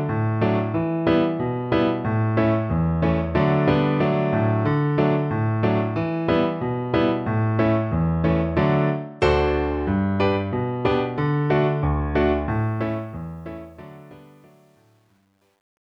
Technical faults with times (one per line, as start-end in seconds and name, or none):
12.50-15.84 truncation distortion on a fade